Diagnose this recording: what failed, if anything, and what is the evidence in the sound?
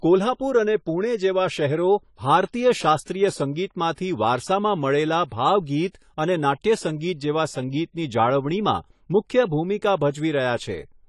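Codec stage: likely AAC compression, consistent with about 32 kbps, throughout. The encoder's lowered cut-off removes everything above 11.5 kHz, and coarse quantising leaves the speech dull, smeared and fizzy.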